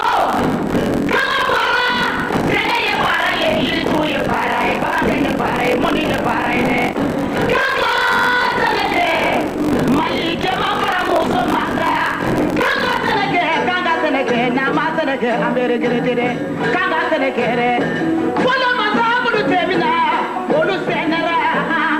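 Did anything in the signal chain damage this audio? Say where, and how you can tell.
Yes, buffer tearing at the driver or buffer stage, from the start to 13.15 s. A steady rattle at 46.9 Hz rides on the sound wherever signal is present. That rate fits a 1024-sample buffer. The writer and the hardware read pointer have drifted so that roughly half of each period replays audio about 40 ms old, with hard joins either side. The waveform shows regular step discontinuities, and the spectrogram shows evenly spaced vertical broadband lines.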